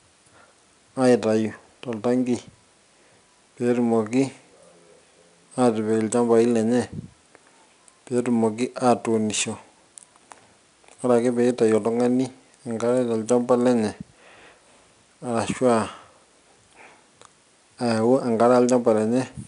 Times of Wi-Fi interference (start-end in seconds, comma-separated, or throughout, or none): none